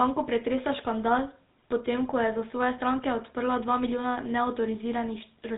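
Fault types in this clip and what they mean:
GSM full-rate codec: the early mobile speech codec, audibly damaging this speech throughout, giving buzzy, gravelly roughness and nothing above 3.8 kHz, consistent with roughly 13 kbps coding.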